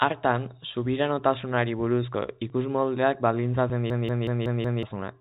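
At 3.90 s, right after "subiranotasunari buruzko ikusmoldeak baldintzatzen", a system hang loop begins and lasts until 4.83 s. The playback system stalled while the hardware kept replaying the same 186 ms slice of its ring buffer, which fits an 8192-sample buffer. That slice plays five times at 5.38 Hz, a machine-gun stutter that costs about a second of audio. On a waveform the block repeats identically. On the spectrogram, which shows the telephone band's empty region above 4 kHz, the pattern tiles in exact copies.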